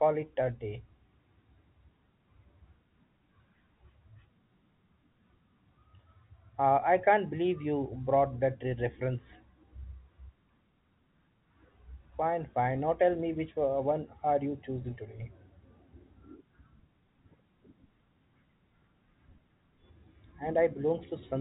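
Nothing stood out on listening: the speech arrives through a telephone-style call path that carries nothing above 4 kHz, and no technical fault can be heard anywhere in it.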